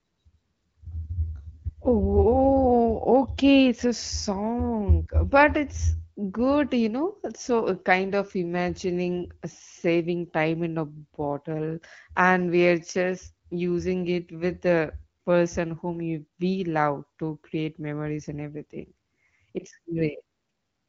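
Nothing goes wrong anywhere in this speech recording, which comes over an AMR wideband (HD Voice) link at 12.65 kbit/s, a rate where the codec leaves only light marks on the sound.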